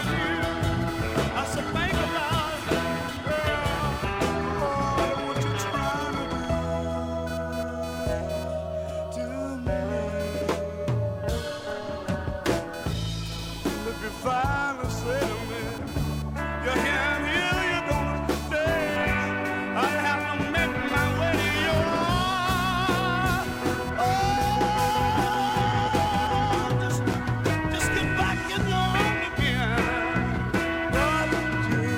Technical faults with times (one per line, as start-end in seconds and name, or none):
0.00-31.97 computer activity noise